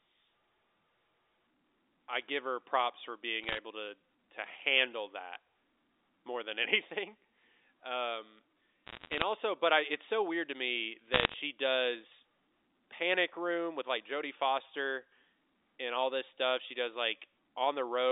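Speech over a telephone-band line, with three bursts of crackle from bit errors on a digital phone line: 3.43–3.58 s after "give her props for", 8.87–9.24 s before "also but I it's", and 11.13–11.34 s after "so weird to me". Flipped bits corrupt single samples, and hits on high-order bits snap out as sharp ticks. The first burst is densest, with roughly one bit in a hundred wrong. The G.711 band limit is audible as the usual 300 Hz to 3.7 kHz narrowness.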